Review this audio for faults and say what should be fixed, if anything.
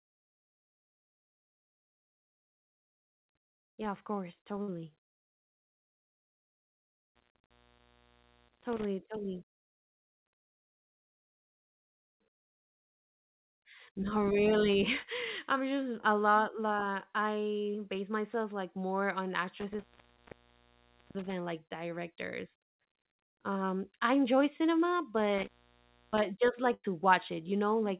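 Two bursts of packet loss break the speech. The first comes at 4.62 s, just after "yeah of course". About 60 ms of audio is missing there. The second is at 26.74 s, with about 100 ms gone. In each gap the receiver stretches the last sound and fades it. You hear a brief held buzz or dying hiss. Then the speech jumps ahead. Prevention: use a larger jitter buffer and forward error correction on the link.

An intermittent contact cuts the line three times. The first dropout runs from 7.15 to 8.85 s, with the line open for about 0.98 s. The second runs from 19.59 to 21.33 s, open for about 1.31 s. It falls between "myself like more on" and "like directors". The third runs from 25.38 to 26.19 s, just after "I enjoy cinema", open for about 0.62 s. Each one starts and ends with crackle, and faint hiss remains while the connection is broken. Prevention: reseat or replace the loose cable or plug and secure it against movement.

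The narrowband call path, with nothing above 4 kHz, is consistent with G.711 mu-law.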